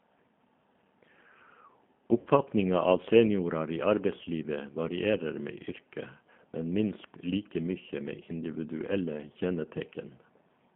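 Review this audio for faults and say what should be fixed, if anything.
The G.729 codec is audible throughout. The speech is confined to roughly 150 Hz to 3.4 kHz and sounds rough and synthetic, consistent with 8 kbit/s model-based coding. Use a wideband codec such as G.722 or Opus where the network allows it.

VoIP packet loss concealed by the speech codec occurs at 2.20–2.29 s. About 60 ms was lost, which fits six 10 ms frames, and the decoder extrapolated from its last pitch and filter with falling gain. Add jitter buffering and forward error correction, or improve network QoS, to prevent the loss.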